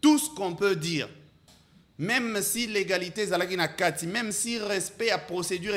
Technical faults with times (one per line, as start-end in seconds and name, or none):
none